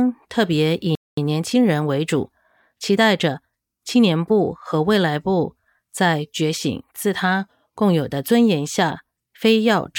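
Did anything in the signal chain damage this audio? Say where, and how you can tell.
Yes. In playback, the speech goes silent from 0.95 to 1.17 s, about 220 ms, then resumes. This playback stall likely came from a starved buffer.

Time-compressed catch-up follows from 1.17 to 3.37 s. The speech runs 1.1 times fast at normal pitch, as small cross-faded cuts drain the backlog.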